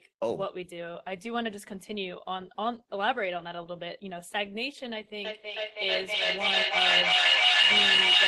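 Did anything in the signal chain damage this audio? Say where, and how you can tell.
Yes. From 5.25 s to the end, a feedback howl takes over. It is an acoustic loop: two devices in one room share the call, so the loudspeaker output re-enters the microphone and gains on each pass. The repeats narrow onto a tone near 3 kHz, pulsing about every 0.3 s, and peak about 10 dB above the speech. A spectrogram shows a bright horizontal line near 3 kHz thickening in regular pulses, and the waveform envelope swells rather than decays.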